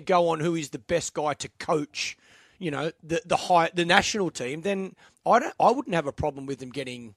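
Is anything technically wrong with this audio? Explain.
No, nothing technically wrong can be heard here.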